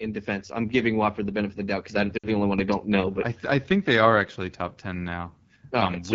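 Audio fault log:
Throughout: AMR wideband (HD Voice) codec. The speech sounds rough and raspy, with plainly audible damage. That fits the 8.85 kbit/s mode, one of the two lowest rates. The pulse-driven vocal tract model has too few bits here, and the top band up to 7 kHz is only shaped noise.
2.17 to 2.28 s: lost AMR speech frames. Between "of the doubt because" and "only one I don't", about 60 ms of sound is lost and it quickly drops to near silence. That fits three lost 20 ms frames. The decoder repeated the last good settings with falling gain, then resumed weakly.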